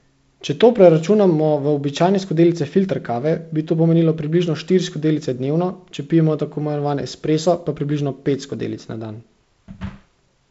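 No faults found in the speech; the G.722 wideband path at 48 kbit/s leaves light coding grain with nothing above 7.7 kHz.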